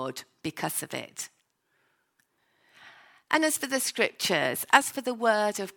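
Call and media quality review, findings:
Clock drift buffer slips: likely a clock mismatch between capture and playback devices, around 500 ppm. The intermediate buffer drifts until a few tens of samples are dropped or repeated. Regular clicks every 1.19 s, roughly four, from 1.24 s, just after "because of", to 4.82 s, heard over the speech.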